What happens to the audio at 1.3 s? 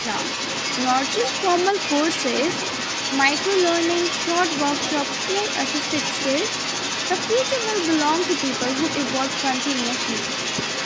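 At 1.3 s you can hear a second voice running under the talker, nearly as loud, only a few dB down. That's the other side's voice leaking through, and it lasts the whole clip, 0 to 10.86 s. Most likely the echo canceller failed to strip the loudspeaker playback from the mic.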